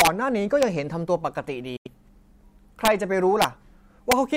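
Speech with two kinds of fault. Integer overflow produces sharp, violent cracks at 0.00 to 0.07 s, 0.63 s, 2.85 to 2.88 s, 3.42 to 3.44 s and 4.12 s. On each of these loud peaks the signal is driven up to about 3 dB past full scale. Instead of being held at the limit, the sample values wrap to the opposite sign and jump across the whole range, which is why these sound far harsher than ordinary clipping. From 1.76 to 1.87 s the audio cuts to silence, then picks up further along, as though playback had continued underneath. That is the signature of a Bluetooth dropout, most likely from packets that failed to reach the headphones in time. About 85 ms of audio is missing, which fits roughly four lost frames.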